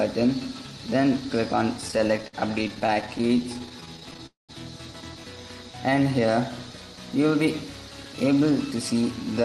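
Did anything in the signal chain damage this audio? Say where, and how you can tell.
Yes. Repeated stalls (stutter) from 1.81 to 4.20 s point to the network and jitter buffer: 33 short gaps, the longest 57 ms, bridged with 407 ms of continued sound. On a spectrogram, brief smeared, repeated slices recur; the waveform shows stretched, looping segments, with nothing dropped.

From 4.26 to 4.51 s the audio stops moving forward for 223 ms, with the last sound continued as a fading tail and 140 ms of near silence. This is likely a call audio freeze, caused by packets held up in transit. On a spectrogram a vertical blank band appears after a fading smear, and the audio resumes where it left off.

A jitter buffer slow-down runs from 5.71 to 6.32 s. The receiver repeated pitch periods, adding 69 ms and playing at 90% speed with unchanged pitch. The waveform shows near-identical cycles repeated back to back, and the spectrogram shows harmonics drawn out horizontally without shifting in frequency.

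A jitter buffer speed-up from 8.24 to 9.42 s plays at 106% speed, with around 70 ms trimmed out as short pitch-period cuts to reduce delay. The audio sounds hurried at the same pitch. Spectrogram events sit closer together, and the waveform shows small splices between cycles.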